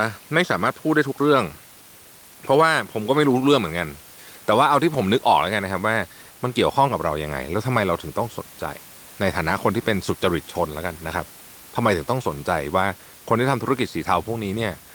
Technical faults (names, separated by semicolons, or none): none